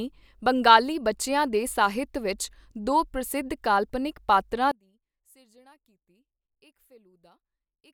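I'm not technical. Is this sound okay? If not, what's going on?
No. At about 4.72 s, right after "ਦੋ ਪ੍ਰਸਿੱਧ ਕਾਲਪਨਿਕ ਪਾਤਰਾਂ", the speech suddenly shrinks to a faint trace. It stays that way to the end. The likely cause is one channel inverted: one stereo side is flipped upside down, so the two sides cancel when mixed together.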